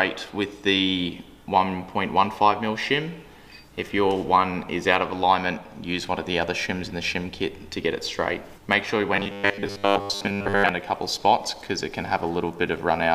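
Robotic sound from repeated short buffers runs from 9.16 to 10.69 s. For most of that stretch the sound is replaced by a rigid, metallic buzz at a fixed 100 Hz that still roughly tracks the shape of the original audio. The likely cause is new audio arriving too rarely, so the playback side keeps looping the last fragment, about 10 ms long, while the real material in between is dropped.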